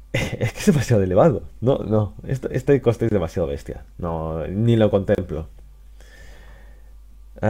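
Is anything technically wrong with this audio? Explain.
Yes, there are two gaps at joins of encoded pieces: about 24 ms at 3.09 to 3.11 s and 31 ms at 5.15 to 5.18 s. Separately encoded chunks were joined untrimmed, keeping encoder delay and end padding, so the sound briefly drops out with softened edges and resumes where it stopped.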